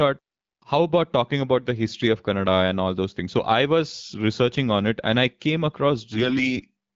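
From 6.12 to 6.60 s, right after "it and I came", the speech suffers AMR bit errors. Over that half second, a few percent of the weakly protected bits in each AMR frame arrive flipped. The checksum guarding the key bits still passes, so the decoder uses the frames anyway. Its excitation pulses land out of place, and the fine pitch, gain and spectral values go wrong. The voice keeps its rough pitch and level but turns hoarse, scratchy and gargly, an abrupt roughening against the clean AMR-WB coding at 12.65 kbit/s around it.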